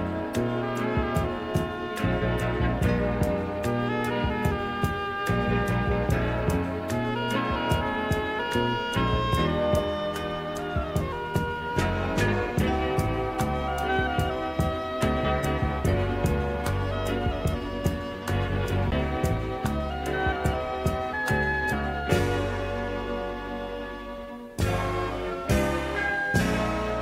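At 18.91 s there is a CD skip. A jolt or a flaw on the disc made the laser jump to a different turn of the spiral, so the player muted for roughly 10 ms and then resumed from another point in the track. The sound breaks with a tick or tiny gap and carries on out of sequence. On a waveform this shows as a very short dip in level with mismatched material on either side. On a spectrogram it is a narrow vertical break.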